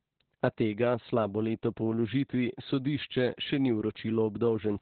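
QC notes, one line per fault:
Throughout, Opus voice compression: the speech is boxed in with nothing above about 4.3 kHz, so it sounds muffled and phone-like. The narrowband SILK linear-prediction mode is throwing away the top end and coding the excitation very coarsely, which leaves the voice hoarse and a bit robotic. The damage is heavy, which fits a very low bitrate of around 8 kbps working in 20 ms frames.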